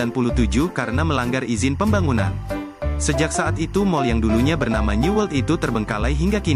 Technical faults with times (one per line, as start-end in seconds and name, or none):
0.00-6.56 timecode bleed